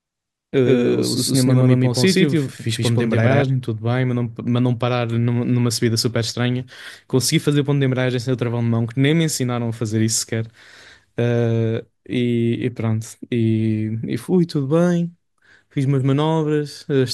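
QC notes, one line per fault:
0.00–3.42 s doubled audio track: speech echoed about 150 ms behind at near-equal level, likely a slower second path; twin offset envelopes, abrupt end.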